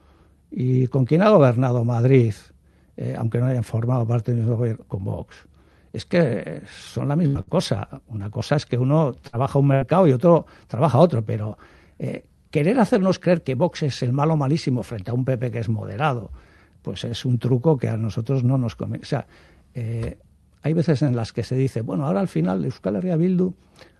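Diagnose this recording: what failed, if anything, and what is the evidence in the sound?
The network stage dropped packets repeatedly from 6.85 to 7.52 s, causing repeated packet loss (robotic sound). The receiver patched three gaps, the longest 68 ms, by extending the preceding sound. About a fifth of that stretch is concealed and 60 ms is lost, so it sounds choppy.

Two bursts of packet loss hit the network stage, at 9.27–9.36 s and 9.75–9.84 s. Each time, about 60 ms of audio never arrived, and concealment filled the gap by continuing the last sound while fading it. You hear a brief held buzz or hiss, then the audio resumes further on.

A jitter buffer speed-up happens at the buffer stage from 13.00 to 13.36 s. The buffer had overfilled, so the receiver trimmed pitch-period slices, around 50 ms in total, to cut the delay. The audio runs at 111% speed with unchanged pitch and sounds briefly hurried.

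A short stall from a late packet occurs at 17.09 s. The jitter buffer ran empty, so the receiver stretched the last sound for 25 ms until the packet arrived, then continued from where it stopped. Nothing is lost, but one sound lingers with a slight buzz or dip.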